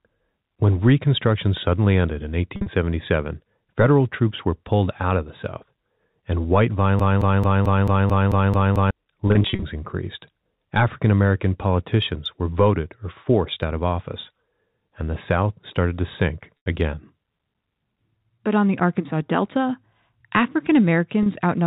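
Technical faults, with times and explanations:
2.56–2.66 s (after "suddenly ended in"), 9.28–9.62 s, 16.57–16.66 s (after "started to sink"), 21.23–21.26 s, packet loss with pitch repetition: gaps of 90, 200, 90 and 30 ms, the first two scattered in runs no longer than 50 ms, are bridged by repeating the last pitch period, giving brief held, buzzy tones.
6.99–8.91 s (after "and white"), broken-record loop: a 220 ms fragment plays nine times back to back, likely because the stream stalled and kept resending its last buffered piece. The audio that belonged in those two seconds is lost.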